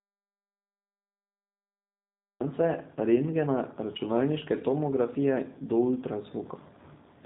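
From the very start until 2.40 s the clip is dead silent: an audio dropout to silence already under way when the file begins. There is no room tone or hiss at all, so the input was most likely lost, through a disconnected or muted source, while the recorder kept writing silence. On a waveform this stretch is a flat line; on a spectrogram it is solid black across every frequency until the speech abruptly appears.

Once the speech arrives at 2.40 s, it carries the G.729 codec's sound for the rest of the clip, at 8 kbit/s in its G.729A form. The codec rebuilds each 10 ms frame from a vocal tract filter, a pitch predictor and a handful of pulses, so the speech sounds plainly rough and somewhat synthetic. A spectrogram shows a hard ceiling at 4 kHz with nothing above it, and blurred, smeared harmonics below it in place of crisp fine detail.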